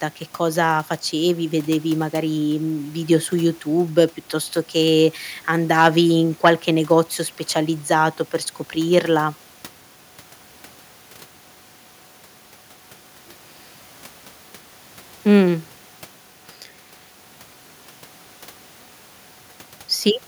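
A speech recording with no technical faults to report. Nothing in the signal or its playback calls for correction.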